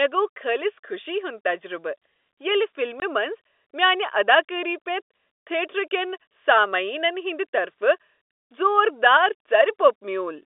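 At 3.0 s, packet loss filled with silence cuts a 20 ms hole in the speech, which fits a single lost packet replaced by silence. Concealment would smear or repeat the surrounding sound, but this gap is dead quiet, with hard edges.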